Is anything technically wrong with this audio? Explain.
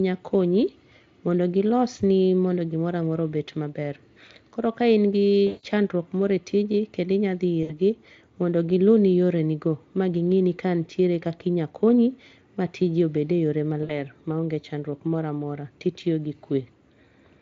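Yes. Three short stretches of the speech go smeared and buzzy. From 5.47 to 5.66 s, after "koro ka in gi" and before "chandruok moro e tiji", the sound stretches into a fading buzzy tone or coloured noise for about 160 ms. Shorter versions, about 60 ms each, come at 7.63 to 7.73 s, between "tiji kendo inya dhi" and "gi mondo gi luni", and at 13.83 to 13.92 s, between "tiji obed e yore" and "ma ong'e chandruok moro".

This is VoIP packet loss concealed by the speech codec. When packets went missing, the Speex decoder filled the gaps by repeating its last pitch and spectral shape with steadily falling gain. That repetition is what produces the buzz and the fade. The longest gap fits roughly eight lost 20 ms frames. Because each decoded frame depends on the previous one, the speech stays weak or distorted just after each gap rather than recovering instantly. Outside these gaps the Speex coding itself leaves at most faint traces.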